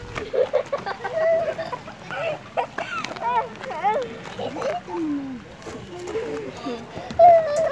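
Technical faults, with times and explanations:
No technical faults detected.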